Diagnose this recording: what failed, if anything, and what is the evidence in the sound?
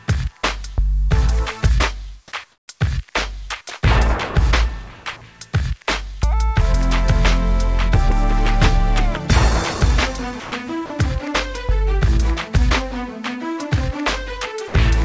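Call processing at the sending end is the stage at fault. Its discontinuous transmission likely swapped the real background for comfort noise in place of the background from 2.52 to 2.68 s. For those 160 ms, the quiet bed, sitting about 44 dB below the loudest passages, turns into a smooth, featureless hiss about 7 dB lower, then the genuine background returns. The receiver generated that noise from a rough spectral sketch rather than the actual room sound.

The same stage produces sound dropped by the voice detector at 10.40 to 10.52 s, 10.86 to 10.90 s and 14.68 to 14.74 s. The sender's detector likely judged quiet content as background and stopped sending. The receiver filled each gap with synthetic noise for 120, 40 and 60 ms, and about 90, 40 and 60 ms of real sound vanish. The dropouts sound like brief clipped-off moments replaced by flat hiss. Under all of this, the call codec's band limit is audible: nothing reaches above 8 kHz, which fits G.722.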